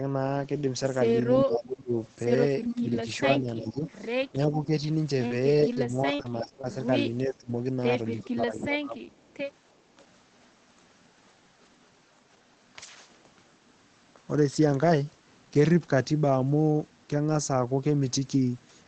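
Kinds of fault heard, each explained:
Speech suppressed in double talk: Between 1.34 and 9.24 s the talker keeps getting pushed down, about 3 s in total, with the deepest dips around 20 dB. It sounds like the level sagging or parts dropping out in chunks. The likely cause is an echo canceller hearing both ends talk at once, failing to tell its own talker from the loudspeaker echo, and squashing everything to be safe.
Echo leak: A delayed copy of the speech comes back about 0.36 s late, which is likely a loudspeaker's output sneaking past the far end's echo canceller and getting sent back. It pops up at 1.52 and 2.64 to 2.81 s at only about 5 dB under the speech. Later it's fainter: about 20 dB down around 7.30 s, and about 40 dB down from 9.30 to 9.52 s.
Short concealed packet loss: Two little holes, each about 20 ms of audio that never arrived in time. The first is around 5.27 to 5.38 s and the second around 5.73 to 5.77 s. 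The decoder papered over each by stretching the preceding sound and blending back in. The result is a quick smear or wobble rather than a clean gap, and a short consonant there can get swallowed.
Lost packet rebuilt from error correction: At 5.30, 5.49 and 5.75 s a 20 ms slice was lost. Because Opus carried a low-bitrate backup copy in the next packet, there's no hole. Those three slices are simply played from the rougher copy, so you get brief grainy, noisier moments instead of dropouts, tucked right in among the concealment blips around 5.3 to 5.8 s.
Repeated packet loss (robotic sound): From 6.15 to 6.65 s packets go missing over and over. That's four gaps, the longest about 38 ms, and roughly 16 percent of that half second is patched rather than real. Each patch extends the last bit of sound and the next loss lands right after, so this stretch comes across as choppy, with small pieces missing.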